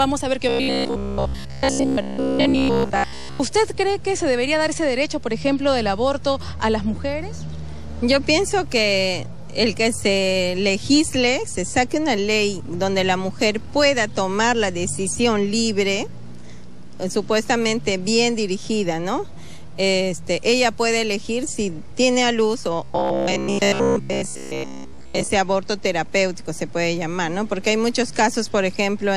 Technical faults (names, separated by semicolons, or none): robotic sound from repeated short buffers